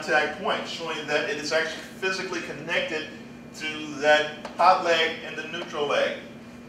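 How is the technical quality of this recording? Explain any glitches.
The technical quality of this recording holds up, with no glitches to explain.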